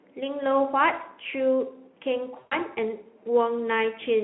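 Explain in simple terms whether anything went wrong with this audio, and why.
Between 2.39 and 2.57 s there is VoIP packet loss concealed by the speech codec. About 120 ms of data never arrived, so the decoder filled the gap by stretching the last sound it had, which comes out briefly as a buzzy tone or a coloured noise that fades, and the voice stays weak or distorted for a short while after the data returns.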